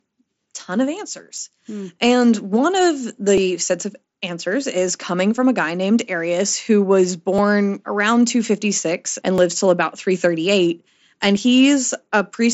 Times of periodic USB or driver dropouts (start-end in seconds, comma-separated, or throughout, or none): 1.38-11.37